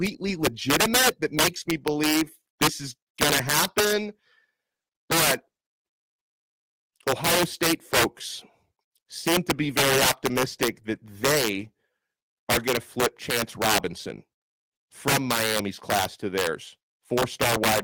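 Throughout the speech, the loudest moments break into hard, violent cracks rather than the duller flattening of clipping. This is integer overflow: the signal was driven about 13 dB too hot, and instead of being held at full scale, every peak that exceeded the integer limit wrapped around to the opposite extreme. Only around two percent of samples cross that line, so the damage lands on loud syllables, where each wrapped peak snaps violently.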